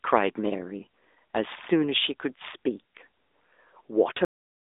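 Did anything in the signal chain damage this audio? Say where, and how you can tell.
Yes. At the codec stage, an AMR narrowband mobile codec runs throughout: nothing above 3.8 kHz, a 300 Hz to 3.7 kHz line band, and a plainly buzzy, synthetic texture from pulse-driven vocal-tract modelling, which fits AMR-NB near 10 kbps. Unlike a simple low-pass filter, it adds this synthetic texture.

At the buffer or playback stage, the clip has a cut-off end at 4.25 s: the speech stops mid-sound and drops straight to digital silence with no decay. That points to final buffers never written or played, rather than a fade-out or gate, which would leave some tail.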